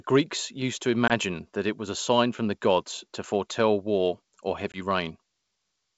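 Packet loss on an ADPCM call at 1.08–1.12 s, after "used to", and at 4.72–4.78 s, after "to foretell war or": each time about one 20 ms packet becomes a hard-edged silence. The decoder's predictor and step size drift from the sender's, so the speech resumes slightly distorted and settles within some tens of milliseconds.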